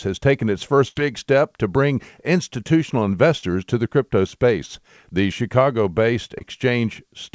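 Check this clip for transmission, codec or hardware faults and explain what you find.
Packet loss on the call link caused three dropouts: one burst and two brief concealed gaps. The G.722-style path is audible in the band ending at 8 kHz.

Burst of packet loss, 0.88 to 0.97 s, between "has taken its" and "big step to bring": about 80 ms of packets never arrived. The receiver continued the last sound and faded it down, then resumed further on.

Short concealed packet loss at 3.39 to 3.44 s, after "step to bring institutional" and before "to the crypto space", and again at 6.38 to 6.42 s: the decoder patched gaps of about 31 and 21 ms, losing about 40 and 20 ms of audio, by extending the preceding sound and blending back. Each is heard as a quick smear or wobble.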